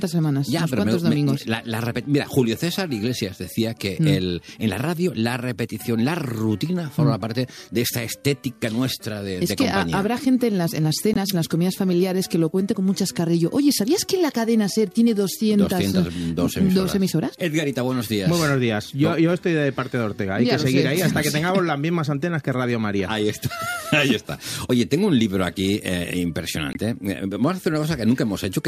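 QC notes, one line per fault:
11.13–11.17 s, corrupt frame muted: a 32 ms gap of silence opens abruptly. It fits a couple of damaged compressed frames that the decoder rejected and the player replaced with silence. Timing is kept, so the sound resumes on schedule.
26.72–26.77 s, corrupt frame muted: the same kind of fault, with a longer 44 ms hole. It points to several consecutive rejected frames being muted. The cut starts abruptly.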